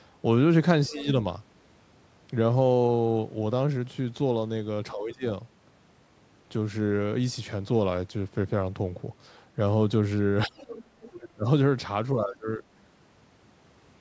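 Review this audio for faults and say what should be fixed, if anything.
The speech dips sharply, by up to roughly 20 dB, at 0.89–1.07, 4.93–5.24, 10.46–10.76, 11.2–11.46 and 12.13–12.63 s. This is speech suppressed in double talk, likely the echo canceller turning down everything during overlapping talk. A better double-talk detector or a less aggressive suppressor would keep the near talker audible.

A faint second voice, about 15 to 20 dB below the speech, slips in at 0.92–1.05, 10.57–10.84 and 11.01–11.28 s. This is the other side's voice leaking through, likely where loudspeaker echo survives cancellation. Headphones, lower speaker volume or a longer echo-canceller filter would stop it reaching the microphone.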